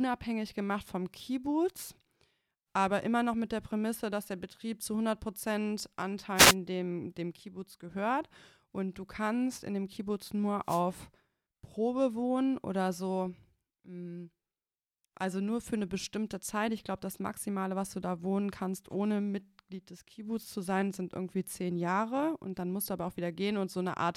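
At 6.35 s there's a wireless microphone noise hit lasting about 0.2 s, right before "dem dem", and a second one from 10.64 to 10.83 s. Both are short bursts of static swishing over the speech. The FM radio link from the mic faded as reflected signals cancelled each other, so the receiver's own noise rose up and broke through before the signal recovered.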